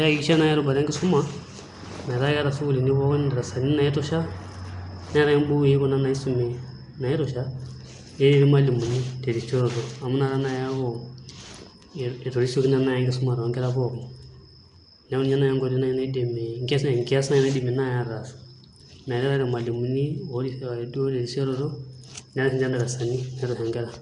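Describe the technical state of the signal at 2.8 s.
At 2.8 s, as throughout, the speech sounds like Nellymoser compression, likely from its fixed-bit block coding: rough, hissy and smeared, with nothing above 10.6 kHz.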